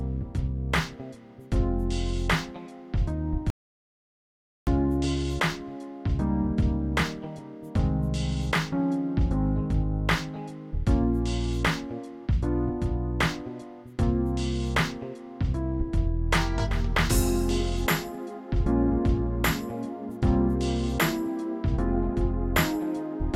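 An audio dropout to silence runs from 3.50 to 4.67 s: the sound cuts off abruptly, and about 1.17 s is replaced by silence, likely from the input briefly disconnecting or muting while recording continued. The waveform flatlines, and the spectrogram shows a fully black gap with no room tone.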